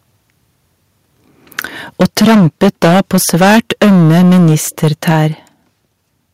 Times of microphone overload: 1.58-1.60, 2.00-4.56, 4.83-5.26

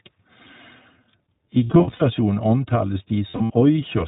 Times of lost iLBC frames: 1.64-2.02, 3.29-3.52

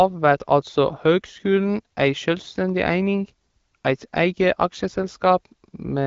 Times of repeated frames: none

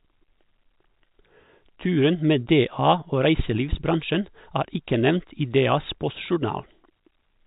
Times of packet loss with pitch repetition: 2.44

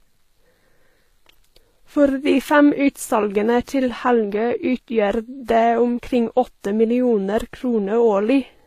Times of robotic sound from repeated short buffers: none

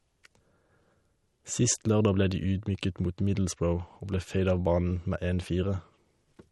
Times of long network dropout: none

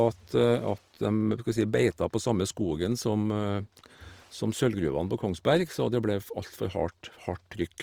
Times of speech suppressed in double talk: none

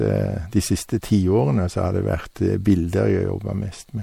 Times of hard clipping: 2.69-2.72

